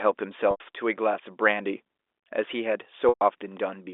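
Speech over a telephone-band line, hit twice by packet loss with pitch repetition. Audio went missing for 90 ms at 0.51 to 0.60 s and 120 ms at 3.09 to 3.21 s. The receiver looped the last pitch period to bridge each gap, heard as a brief held, buzzy tone that fades before speech resumes.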